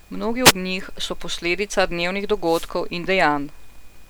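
Short swishes of static break through the speech at 0.44 to 0.52 s and 2.44 to 2.72 s: wireless microphone noise hits, where the FM radio link fades and receiver noise surges.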